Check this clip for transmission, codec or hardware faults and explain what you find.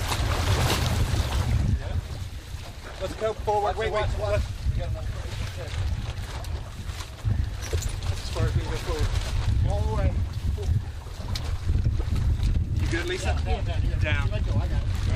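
Two short faults of the same kind are present. Corrupt frame decoded, at 6.16 s and 7.73 s: flipped bits in a couple of compressed frames were decoded anyway, putting energy at wrong frequencies. Each is a brief chirp-like blip, the second clearly louder. Each appears as a thin vertical smear on a spectrogram and a spike in the waveform.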